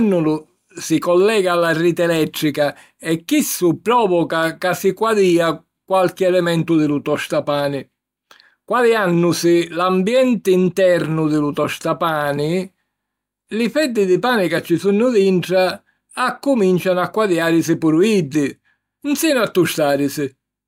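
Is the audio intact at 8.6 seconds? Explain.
Yes, the audio is intact at 8.6 seconds, with no dropout, click, distortion or other fault at that point.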